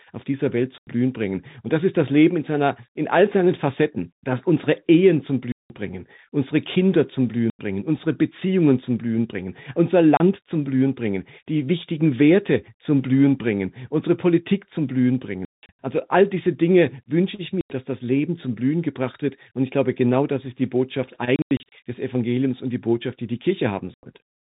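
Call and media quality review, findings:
Packet loss filled with silence on the receive path: dropped packets replaced by silence, gap lengths in 30 ms steps, fitting 30 ms packets. Speech chopped by hard-edged holes at 0.78 s (90 ms), 5.52 s (180 ms), 7.5 s (90 ms), 10.17 s (30 ms), 15.45 s (240 ms scattered over 300 ms), 17.61 s (90 ms), 21.36 s (210 ms scattered over 360 ms), 23.94 s (90 ms). G.711 telephone band limit to 4 kHz audible throughout.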